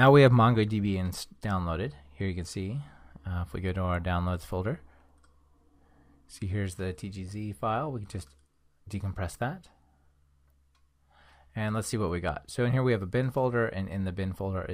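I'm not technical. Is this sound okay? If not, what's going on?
Yes, no faults are audible.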